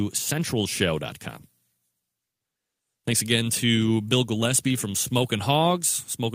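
No technical faults can be heard anywhere in the speech.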